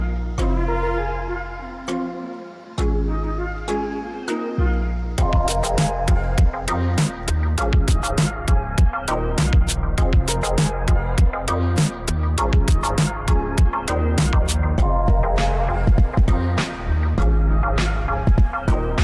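No technical faults to report anywhere in this recording.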